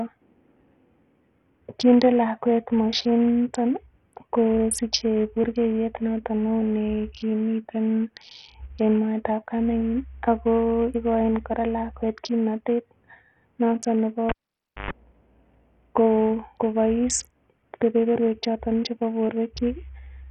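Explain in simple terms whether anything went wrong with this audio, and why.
Yes, two things went wrong. Throughout, the speech was likely squeezed through Bluetooth SBC compression, so the treble is missing above 12 kHz and a gritty, rough edge clings to the sound.

At 14.29 s, right after "noton nebo", a cable was pulled and plugged in. A pop cuts the sound to near silence for about half a second, then a short mains buzz and a second pop as it returns at 14.91 s.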